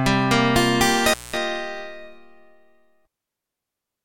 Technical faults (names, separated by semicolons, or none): intermittent contact